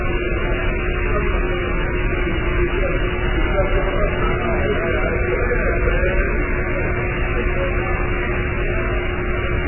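Throughout, nothing sounds above 3 kHz. Heavy, watery swirling smears everything. This is likely MP3 compression at a starved bitrate, which fits about 8 kbps.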